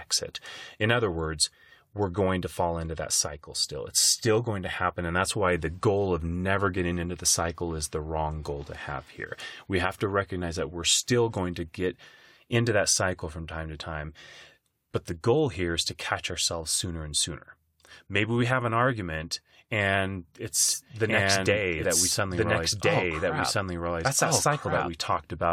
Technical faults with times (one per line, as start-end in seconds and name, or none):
20.68-24.88 doubled audio track